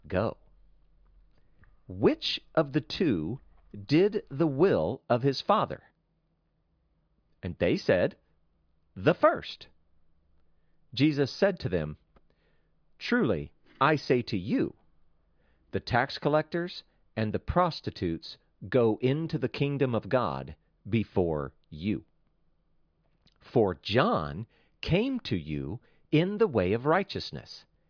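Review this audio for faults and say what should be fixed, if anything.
Nothing in this audio needs to be fixed, as no faults can be heard.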